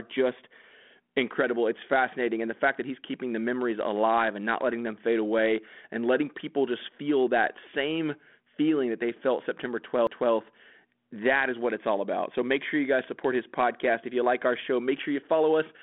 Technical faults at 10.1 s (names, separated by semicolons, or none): CD skip